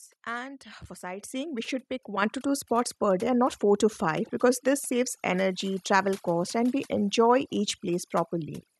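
Overdone noise removal runs through the whole clip: the suppressor was set too aggressively, cutting individual frequency bands down whenever they sat near its noise estimate, taking quiet parts of the speech with them. The background drops to near silence sprinkled with twinkling specks.

Microphone volume stepped up twice, as the call software judged the input too quiet and raised the device gain in a single jump each time. At 1.2 s, between "and for" and "we should pick", voice and background leap up together by about 9 dB. At 2.22 s, after "we should pick" and before "to two spots per", a second jump of about 6 dB lifts everything again mid-sentence.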